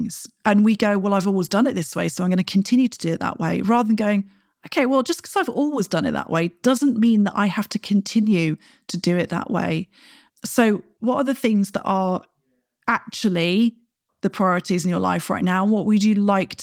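Nothing technical goes wrong anywhere in this recording of speech, so there's no fault to point to or explain.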